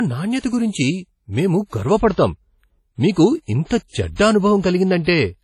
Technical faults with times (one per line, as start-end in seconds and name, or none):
0.00-5.43 low-bitrate audio saved at a high bitrate